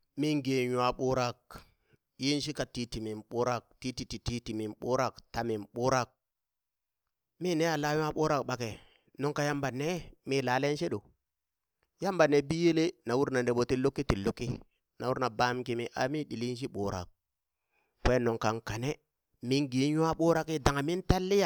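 At 1.58 s, a single sharp tick cuts through the speech. Another comes at 21.13 s. Each is a bit error spike. One flipped bit throws a single sample off by a power of two, peaking at about -29 dBFS. It sounds broadband and unrelated to the voice.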